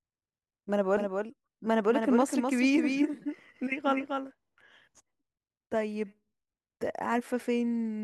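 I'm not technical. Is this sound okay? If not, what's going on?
No. From 0.97 to 4.31 seconds the speech is heard twice: a second, quieter copy trails the first by about a third of a second. It starts and stops suddenly, with no fading echo. This is a doubled audio track, likely from the same sound being recorded a second time through a slower route, or from an edit that left two copies of the audio out of step.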